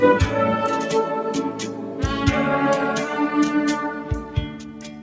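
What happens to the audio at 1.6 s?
Sound cut by the noise suppressor, from 1.51 to 2.0 s: the suppressor judges this stretch to be noise and pulls it down by up to about 4 dB, for a total of roughly four tenths of a second. Held or decaying parts sink and their tails shorten, while sharper onsets come through.

That dip sits within a wider problem present all the way through: a noise suppressor applied to music or sounds. A speech-tuned suppressor treats steady tones and ambience as noise, so levels swing by roughly 5 dB and the sound pumps and thins.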